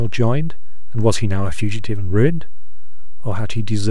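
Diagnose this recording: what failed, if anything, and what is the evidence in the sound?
The speech here sits on a DC offset for the whole clip, with the waveform parked about -13 dBFS off the zero line from start to finish. You won't hear it as a tone. It shows up as a flat, steady lump of energy right at 0 Hz and as a lopsided trace. Most likely the fault is in the analogue front end or the converter, where a biased input stage pushed a constant voltage into the capture. That offset eats a good slice of headroom on one side.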